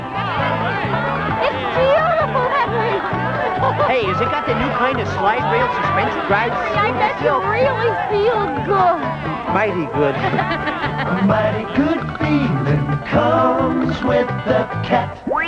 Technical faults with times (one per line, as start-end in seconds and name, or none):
none